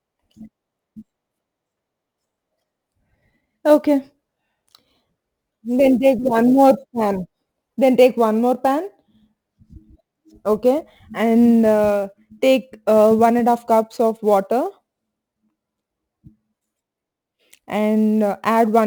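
Throughout the speech, the converter's sampling clock wanders, so each sample lands a little early or late, with timing errors on the order of ten microseconds. This sample clock jitter turns steep parts of the waveform into amplitude errors, leaving a noise floor roughly 30 dB below the signal. It is heard as a fine hiss and graininess that swells on loud and bright passages, such as sibilants, and disappears in the pauses.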